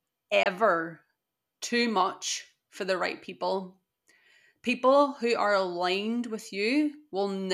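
At 0.43 to 0.46 s a digital broadcast dropout mutes the speech with a 3 ms fade, roughly 24 ms of silence that fits one lost frame, with no smearing or repeated sound.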